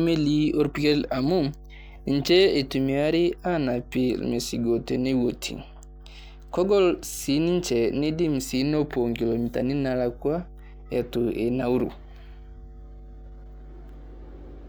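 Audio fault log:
throughout, mains hum: a steady low 50 Hz tone with some low harmonics sits under the speech, roughly 20 dB below it, from power-line current leaking into the signal. A spectrogram shows unbroken horizontal lines at 50 Hz and its multiples across the whole clip.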